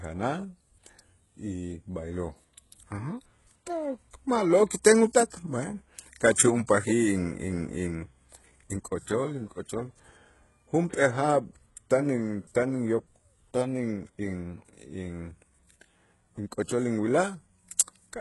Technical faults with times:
0.00-18.21 HE-AAC compression

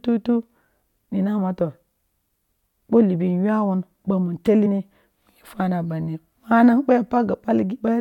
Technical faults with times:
4.65 damaged data in a compressed stream

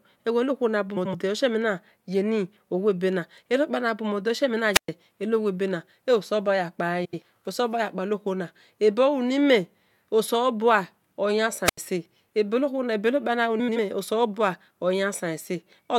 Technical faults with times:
0.96-1.15 frames out of order
4.73-4.88 wireless microphone squelch dropout
7.04-7.22 frames out of order
11.64-11.78 wireless microphone squelch dropout
13.59-13.77 frames out of order

